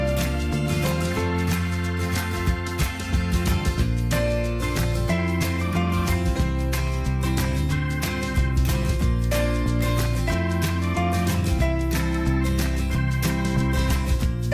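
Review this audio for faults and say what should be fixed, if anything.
Nothing here needs fixing, since no faults turn up anywhere in the audio.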